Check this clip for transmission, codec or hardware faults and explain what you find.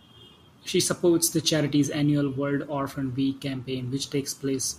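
No transmission, codec or hardware faults can be heard.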